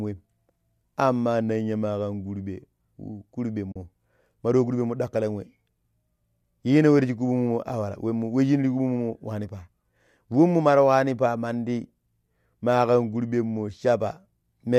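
Speech, with a short AAC frame loss with muting from about 3.72 to 3.76 s. For roughly 40 ms the sound fades down into silence and back up. That length fits about four lost 10 ms frames whose spectra the decoder zeroed. Because the overlapping transform windows taper the edges, the hole is soft-sided, unlike a hard sample dropout. The light coding texture throughout is likely from low-delay AAC compression.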